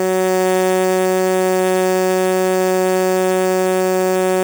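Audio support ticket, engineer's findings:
Imaging from sample-and-hold upsampling, throughout the music. Metallic fizz at about -17 dB. First image spans 4 to 8 kHz. Samples repeated from 8 kHz to 44.1 kHz without an anti-imaging filter.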